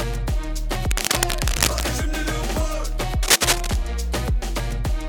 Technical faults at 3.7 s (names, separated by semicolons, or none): cable scratch noise